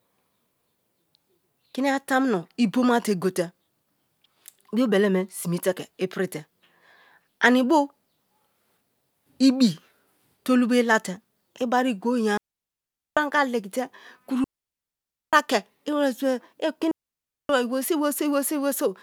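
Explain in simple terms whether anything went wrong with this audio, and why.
Three digital wireless dropouts hit the speech at 12.37–13.17 s, 14.44–15.33 s and 16.91–17.49 s, each lasting 0.6 to 0.9 s. The receiver lost too much data and muted, leaving clean silence with no crackle or hiss around it.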